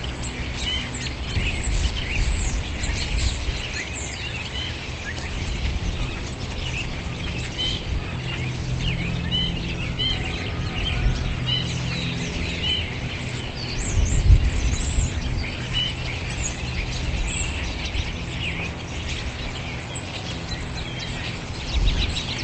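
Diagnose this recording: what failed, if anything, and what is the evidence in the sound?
Nothing failed; no faults found.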